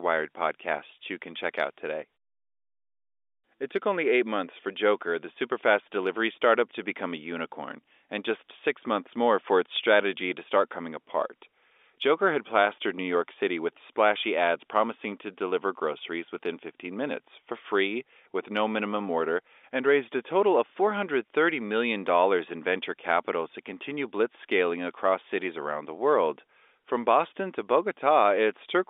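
No technical faults are audible.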